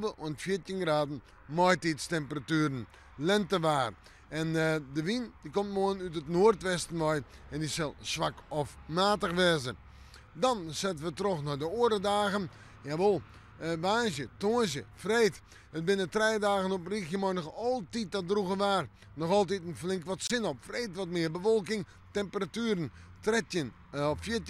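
At 20.27 s the sound cuts out and returns at 20.32 s, a brief Bluetooth dropout. The likely cause is a wireless packet that did not reach the headphones in time, so the output went silent until the next good one arrived; the missing stretch fits a single lost frame of about 23 ms. Unlike a playback stall, where the audio picks up exactly where it stopped, here it resumes further along, as if it had kept playing through the gap.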